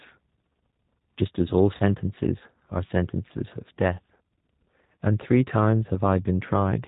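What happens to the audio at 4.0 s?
At 4.0 s the speech sounds slightly rough and synthetic, dull with nothing above 4 kHz, as it does throughout the clip. This is G.729 codec damage, which fits an 8 kbit/s stream: each 10 ms frame is rebuilt from a vocal tract filter, a pitch predictor and a few pulses.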